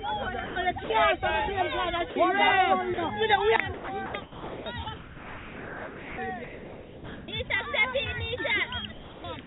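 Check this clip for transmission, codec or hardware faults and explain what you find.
Three kinds of fault are present, heard over a narrowband call path with nothing above 4 kHz, which fits G.711 at 64 kbps.

Sound dropped by the voice detector occurs at 0.46–0.56, 0.84–0.90, 2.10–2.16 and 2.94–2.98 s. The sender's detector likely judged these brief stretches to be background and stopped sending. The receiver filled each gap of 40–100 ms with comfort noise, so the sound briefly turns into flat hiss.

Sound chopped by the voice detector spans 3.74–6.18 s, 6.44–7.50 s and 8.92 s to the end. The detector likely toggled repeatedly between sending and muting, swapping about 1.9 s, 0.86 s and 0.4 s for comfort noise. The sound stutters.

Dropped samples appear at 8.38 s. About a single sample is likely missing, so the waveform jumps abruptly to a later value. It is too brief to remove any sound and is heard as one sharp click, a thin vertical line in the spectrum.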